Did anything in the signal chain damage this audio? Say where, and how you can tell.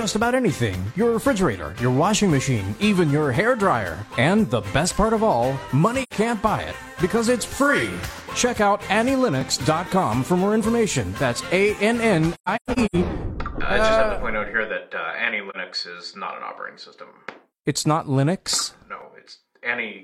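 Yes, at two stages. At the driver or buffer stage, a regular click or pop recurs every 4.79 s from 4.62 s to about 19.0 s, about four events in all. The likely cause is clock drift buffer slips: two devices disagree by roughly 500 ppm, so the buffer overruns or underruns and a block of about 150 samples is dropped or repeated. On the waveform each slip is a small discontinuity, and on the spectrogram a thin full-band vertical line.

At the codec stage there is AAC frame loss with muting. The decoder zeroed the spectrum of lost frames, and the overlapping windows faded the sound out and back in. There are three stretches of loss: 6.03 to 6.13 s (two frames, 85 ms), 12.34 to 12.96 s (nine frames, 384 ms scattered over about 0.6 s, the longest run around 150 ms), and 15.50 to 15.56 s (one frame, 43 ms, a brief dip). On the spectrogram these are blank full-band gaps, and on the waveform the envelope tapers smoothly to silence.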